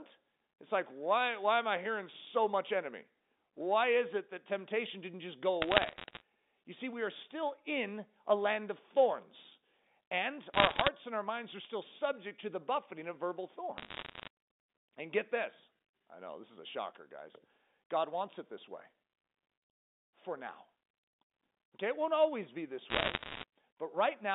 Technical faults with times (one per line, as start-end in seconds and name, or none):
5.62-6.21 bit errors on a digital phone line
10.54-10.88 bit errors on a digital phone line
13.78-14.28 bit errors on a digital phone line
22.90-23.44 bit errors on a digital phone line